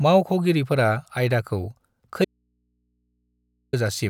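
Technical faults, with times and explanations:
2.25 to 3.73 s, audio dropout to a faint residue: the speech cuts off abruptly mid-flow and for about 1.48 s only a low mains hum remains, sitting roughly 50 dB below the normal signal level, before the speech snaps back in. The edges are hard rather than faded, so it does not sound like a natural pause. The likely cause is the wanted signal being lost while the path after the break stayed live, leaving the open input to pick up hum.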